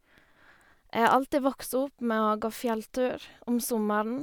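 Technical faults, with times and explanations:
The signal carries no audible technical fault at any point in the recording.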